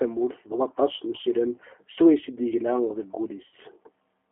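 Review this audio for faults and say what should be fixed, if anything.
G.729 codec damage runs through the whole speech clip. The band is narrowed to roughly 250 Hz to 3.4 kHz, and the voice has the rough, slightly synthetic quality of speech rebuilt from a vocal tract filter, a pitch predictor and a few pulses per subframe, which fits G.729A at 8 kbit/s. The damage is plainly audible. Carrying the call on a wideband codec such as G.722 or Opus would prevent it.

VoIP packet loss concealed by the speech codec occurs at 1.21 to 1.25 s and again at 3.48 to 3.53 s. The first gap sounds like about 20 ms of missing audio, consistent with one lost packet. The second sounds like about 40 ms, consistent with two. In each gap the decoder extends the last pitch and filter state at falling gain, so the sound smears into a buzzy tone or coloured noise that fades. The speech stays weak or distorted just after each gap while the decoder state recovers. 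A larger jitter buffer, forward error correction or prioritising voice traffic would prevent it.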